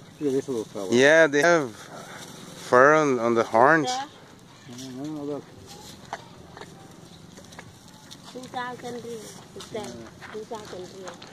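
At 1.40 to 1.44 s, damaged data in a compressed stream corrupts frames, so the decoder misreads them, loses sync and hunts for the next valid frame header. For those 40 ms the sound breaks into a brief chirp, squawk, click or short hole.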